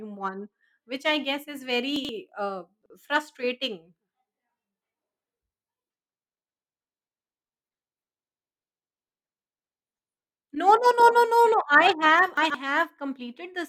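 Brief jumbled stutters at 1.96–2.09 s after "which I guess is", 2.82–2.90 s, and 12.37–12.54 s after "I have": chunks out of order, where roughly 43 ms blocks play one to three slots late.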